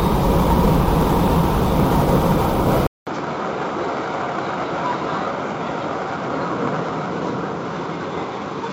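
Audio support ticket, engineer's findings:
Input likely switched to a poorer device at 2.87 s, running to end of clip. Narrower-band path: nothing above 7.6 kHz afterwards, so the sound turns dull. 200 ms silence at the switch. Level drops by about 10 dB. New device adds its own background noise, roughly 35 dB below the signal. Tone changes abruptly at the handover.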